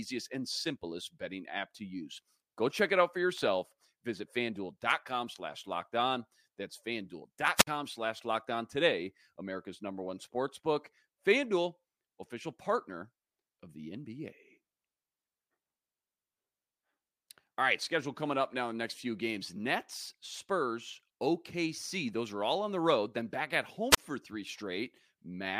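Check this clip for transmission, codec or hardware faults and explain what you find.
Two wireless microphone squelch dropouts interrupt the speech, at 7.56 to 7.67 s and at 23.91 to 23.98 s. Each time the radio link from the analogue FM microphone weakens until the receiver's squelch decides the signal is no longer usable and mutes its output. In the sound, a short burst of hiss or static rises, then the speech cuts to near silence for about 56 ms in the first event and about 30 ms in the second, before returning.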